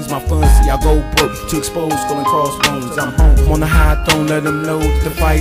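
No faults detected anywhere in the clip.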